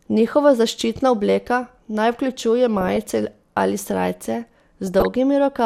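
DAB burbling appears at 2.77–3.11 s, after "zaščitna obleka naj vključuje", and at 4.87–5.06 s, after "ali srajce". Residual bit errors corrupt MP2 sub-band samples, producing short blips of noise in single sub-bands over the speech.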